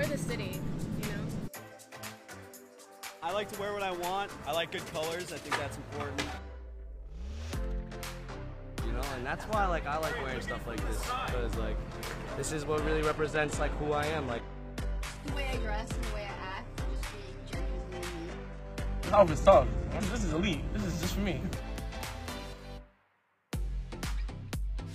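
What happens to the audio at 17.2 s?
At 17.2 s the adaptive stream is at a lower bitrate (12.73–20.73 s). The sudden drop, which points to HE-AAC near 16 kbit/s, leaves the treble cut off. A spectrogram shows a hard ceiling at 12.3 kHz, with no waveform gap.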